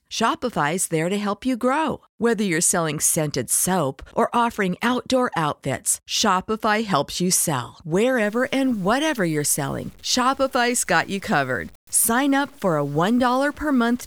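Low bit depth without dither sets in at 8.23 s, right after "helps you sell", and lasts to the end. The speech turns grainy, with quiet passages sputtering, likely from truncation to something like 8 bits with no dither, leaving signal-following distortion roughly 30 dB down.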